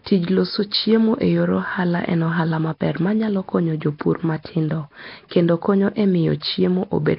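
Throughout, the speech sounds hissy and smeared, almost underwater, with nothing above 5.3 kHz. A spectrogram shows a hard ceiling and noisy, blocky bands, likely from Nellymoser compression.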